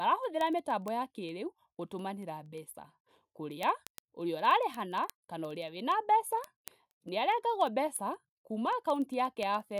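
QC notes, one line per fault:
0.12 to 9.78 s, word clock ticks: sharp, uneven little clicks about every 0.05 s across the speech, around 150 in all. The receiver isn't locked to the sender, so each clock slip drops or repeats one sample, which fits a mismatch of a few hundred ppm.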